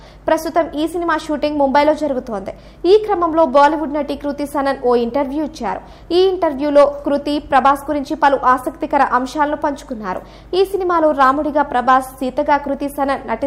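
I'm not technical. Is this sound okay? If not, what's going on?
Yes, the sound is okay. There's nothing in it that points to a technical problem, so there's nothing you need to fix.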